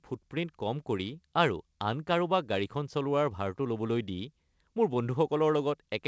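No technical faults can be heard in this speech. The call path's codec shows the usual band limit, with nothing above 8 kHz, which fits wideband G.722.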